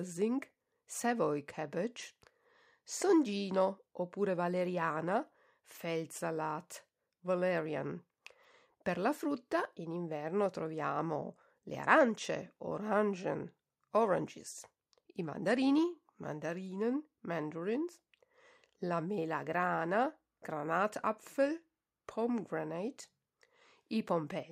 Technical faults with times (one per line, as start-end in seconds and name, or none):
none